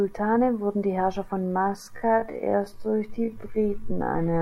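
From 1.42 s to the end, the speech suddenly slows to about 0.57 times its pace while pitch holds steady, so it drags. This is a time-stretched section, likely made by repeating short pieces to fill time. Unlike a slowed playback rate, pitch doesn't drop.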